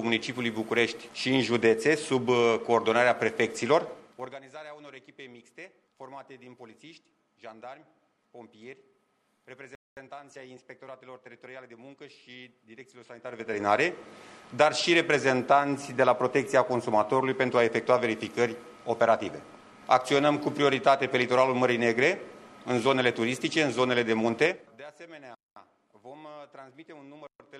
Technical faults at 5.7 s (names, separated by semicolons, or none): none